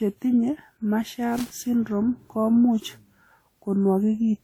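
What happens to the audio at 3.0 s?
At 3.0 s the speech carries generation loss, and it runs through the whole clip rather than starting there. It sounds swirly and hollow, with a smeared quality, and consonant onsets are blurred. The likely cause is repeated lossy re-encoding, around seven passes, in a way that points to WMA at a 96 kbit/s setting. Each pass quantises on a shifted frame grid, so noise and spectral gaps pile up. Content still reaches about 20.1 kHz.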